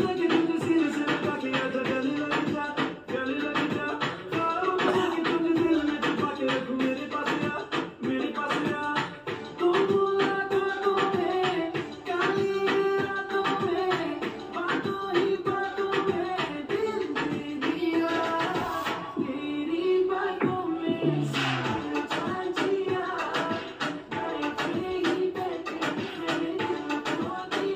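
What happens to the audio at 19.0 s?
Nothing goes wrong at 19.0 s; the audio runs through that moment intact, with no dropout, click or other fault to be heard.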